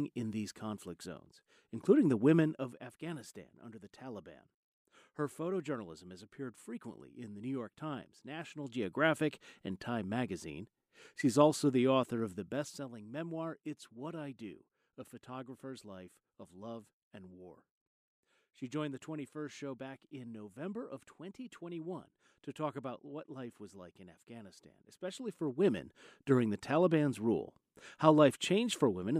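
Zipper noise appears during four level moves: a drop of about 10 dB from 2.36 to 2.84 s, a rise of about 10 dB from 8.44 to 8.92 s, another drop from 12.16 to 13.08 s, and a rise from 24.92 to 25.96 s. The gain is stepped around thirty times per second in increments of a decibel or less, with no smoothing between them, so each jump clicks and the moves carry a fine ticking rasp.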